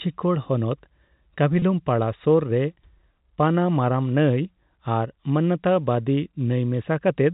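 It's a short speech recording carried over G.711 telephone coding, so the sound is capped below 4 kHz. At 1.59 to 1.62 s there's a packet loss with pitch repetition. About 30 ms of audio drops out, which fits a single lost packet, and the receiver covers the gap by repeating the last pitch period. Because the gap is so brief, it comes across as a slightly held, buzzy blip rather than a silence.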